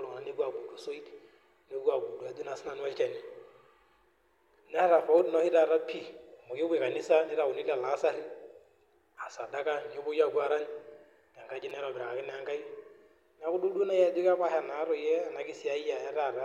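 At 5.18 s and 11.70 s, a repeated buffer occurs: a 5.8 ms block, which fits a 256-sample buffer, replays twice, then three times, producing brief buzzing clicks.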